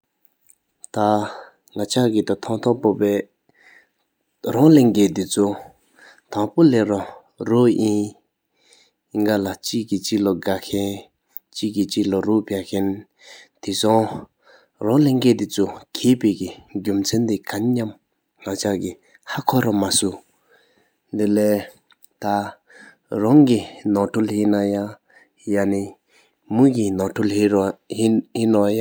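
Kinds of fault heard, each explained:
No technical faults can be heard in this recording.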